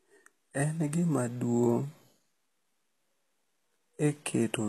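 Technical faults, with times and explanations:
Throughout, HE-AAC compression: the treble sounds synthetic, with s sounds turning gritty and lispy, and the spectrum stops dead at 12.3 kHz. Unlike a plain low-pass filter, which would simply dull the top, the upper band is still present, likely rebuilt by copying lower bands upward under a coarse envelope, so its harmonics fail to line up with the lower spectrum. The plainly audible damage fits a bitrate around 16 kbps.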